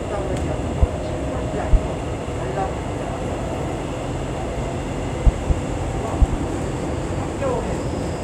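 A recording of everyday sounds carries six loud pops. Single pops strike at 0.83 to 0.86 s and 1.73 to 1.77 s. Double pops follow at 5.27 to 5.53 s and 6.22 to 6.36 s. Each peaks about 20 dB above the surrounding sound, which continues underneath. The likely cause is a sudden voltage step or pulse, from a plug, switch, static discharge or driver glitch. Later circuits shape it into a sharp thump.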